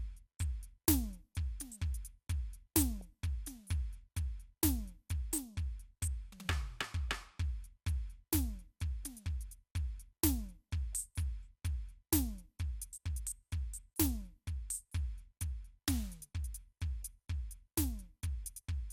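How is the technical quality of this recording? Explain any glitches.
The recording has one brief glitch. DAB burbling at 3.01 s: weak reception let a small fraction of a percent of bit errors slip past error correction, corrupting sub-band samples and scale factors. Individual frequency bands jump in level for up to a frame, giving short blips of noise over the music.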